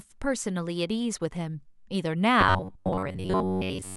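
Speech, where from 2.41 s to the end the playback path is likely starved of new audio and keeps filling the gaps by looping its most recent short buffer, about 10.7 ms long, while the real signal is dropped for roughly 70% of that stretch. The result is robotic sound from repeated short buffers: the repetition imposes a fixed buzz near 93.8 Hz, so the speech turns rigid and metallic, tracking the original syllables only loosely.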